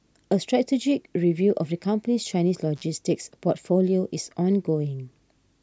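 A speech recording with one intermittent contact fault, between 2.76 and 2.84 s. A loose cable or plug briefly breaks the signal path, so the speech drops out for about 42 ms, with crackle where the connection breaks and remakes and faint hiss in the gap. On a waveform this appears as a short near-flat stretch bracketed by sharp spikes. On a spectrogram, the spikes show as thin vertical broadband lines and the gap as a narrow, nearly empty band.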